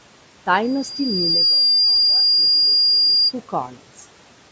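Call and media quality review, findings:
Acoustic loop between loudspeaker and microphone, loop gain above unity at 4.8 kHz: loudspeaker feedback squeal, 0.62 to 3.33 s. Pure tone swells over about a second, then sits around 10 dB above the speech until it ends. Call microphone band limit of 8 kHz and low room noise about 21 dB below the speech.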